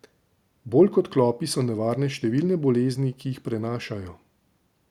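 Speech recording with no audible technical faults anywhere.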